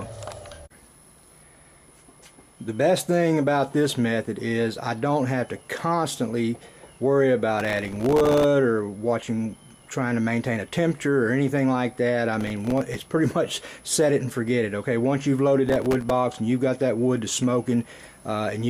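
Three times the processor fell behind and missed a run of buffer deadlines, producing processor overload crackle at 7.60 to 8.44 s, 12.41 to 13.12 s and 15.66 to 16.11 s. Each missed buffer drops out as a tiny hard-edged gap of silence. The grain of the crackle fits very short buffers of around 1.5 ms. The first burst, with dozens of misses, sounds densest. The two later bursts are lighter gritty tearing over the sound, ending as the load clears.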